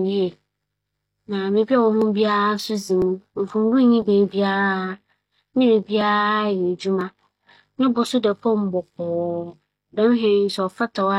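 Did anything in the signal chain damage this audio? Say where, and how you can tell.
Yes. Periodic USB or driver dropouts at the driver or buffer stage: from 2.02 s to 7.01 s, about seven ticks arrive exactly 1.00 s apart, each skipping around a millisecond of speech. Network packet loss would be irregular; this clock-steady spacing points to a recurring bus stall.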